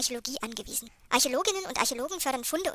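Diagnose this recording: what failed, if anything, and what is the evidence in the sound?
The whole clip runs fast and sits high, sped up 1.45 times and raised 6.45 semitones from start to finish, with pitch and tempo shifting together. That locked shift points to a wrong sample rate at playback, which fits 22 kHz material clocked out at 32 kHz without conversion.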